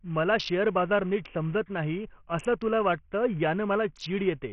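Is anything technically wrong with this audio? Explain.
Yes. Throughout, the speech sounds gritty, with the top gone above about 11.2 kHz. That's likely Bluetooth SBC compression at a starved bit pool, fitting roughly 48 kbps: upper sub-bands get no bits, the rest are coarsely quantised, leaving grainy noise and aliasing.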